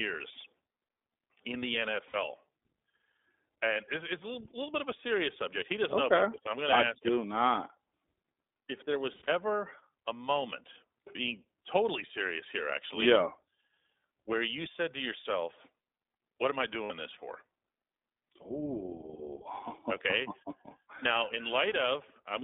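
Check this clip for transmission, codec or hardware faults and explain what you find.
Two faults are present: the whole clip goes through the iLBC codec, and three short bursts of lost iLBC frames interrupt it.

The iLBC codec runs throughout. The speech is confined to about 250 Hz to 3.6 kHz. The damage is plainly audible: a rough, slightly synthetic edge. It fits iLBC's 20 ms, 15.2 kbps mode.

Lost iLBC frames occur at 2.08 to 2.16 s, 9.12 to 9.29 s, and 16.84 to 16.92 s. The first and last each drop 60 ms. The middle one drops 120 ms scattered over about 160 ms, the longest gap about 70 ms. The decoder repeats the last pitch cycle with noise, giving a brief buzzy held vowel. Clean speech returns almost at once.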